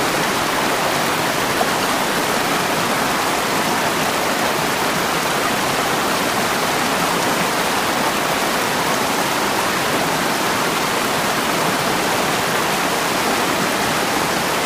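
No technical faults can be heard anywhere in the recording; the signal stays intact and stable throughout.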